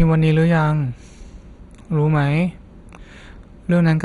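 Throughout the speech there is a dull, gurgling graininess with nothing above 11.2 kHz, the likely result of heavy MP2 compression at a low rate, around 56 kbps. Starved sub-bands switch off and flicker, giving coarse granular distortion rather than a clean low-pass filter's smooth dullness.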